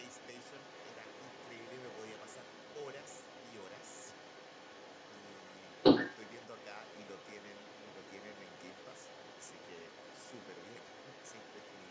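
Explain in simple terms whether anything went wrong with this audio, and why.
The echo canceller on the talker's call device likely failed to remove the other side's voice coming from its loudspeaker. That voice is the other side's voice leaking through from 0 to 11.9 seconds, nearly as loud as the main talker the whole time.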